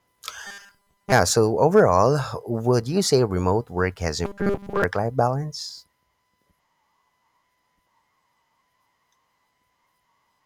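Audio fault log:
0.47–1.12 s and 4.25–4.84 s: robotic sound from repeated short buffers. The sound turns into a rigid, metallic buzz at 200 Hz that still loosely tracks the speech. A loop of about 5 ms is played over and over, likely because fresh audio arrived too slowly, so most of the real signal in these stretches is skipped. A spectrogram shows evenly spaced horizontal harmonics every 200 Hz, and the waveform repeats one identical short cycle.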